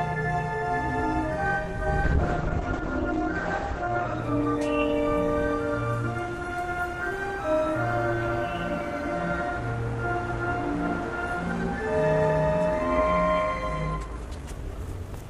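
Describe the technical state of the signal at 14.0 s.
Overlap-add ripple runs through this moment, as it does across the whole clip. Frames were rejoined with an overlap that does not sum evenly. So the level pulses by about 6 dB, a few hundred times a second. It sounds like a metallic buzz, with extra tones around each note.

A time-stretched section also begins at 13.94 s and lasts until 15.3 s. The sound runs about 1.8 times faster here, while its pitch stays put. It comes across as rushed. This is likely pitch-preserving software dropping short pieces to shorten the passage.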